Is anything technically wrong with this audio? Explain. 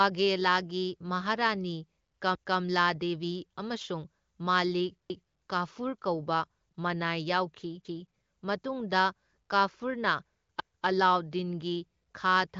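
Yes. Overlapping chunks occur at 2.35 s, 5.10 s (just before "ꯀꯥꯐꯨꯔ ꯀꯧꯕ") and 10.60 s (between "ꯌꯥꯎꯈꯤ ꯃꯇꯨꯡꯗ ꯀꯥꯐꯨꯔꯅ" and "ꯑꯂꯥꯎꯗꯗꯤꯟꯒꯤ ꯈꯥ"). The speech was handled in 2.5 s blocks, and each block begins 250 ms before the previous one finished, so that quarter-second of speech is played twice at each join. The result is an audible stutter, and the repetitions fall at multiples of 2.75 s apart. The speech is band-limited with nothing above 7.6 kHz, consistent with a wideband voice codec such as AMR-WB.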